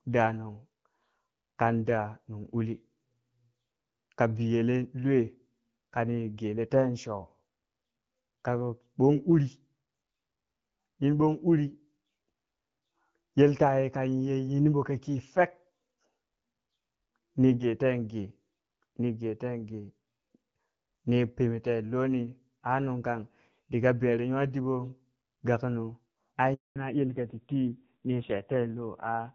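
At 26.54 s the speech cuts out for 220 ms in a handover gap: while the call switched networks, no speech frames arrived, so the sound fades within a few tens of milliseconds and stays silent. On a waveform this is a flat stretch; on a spectrogram, a blank vertical band.

From 26.76 s to the end, a fallback to narrowband takes over. The call leaves the light-damage wideband coding, which fits AMR-WB at around 12.65 kbit/s, for a duller, rougher narrowband codec consistent with AMR-NB near 5.9 kbit/s. The spectrogram shows a sharp ceiling at 4 kHz with nothing above it.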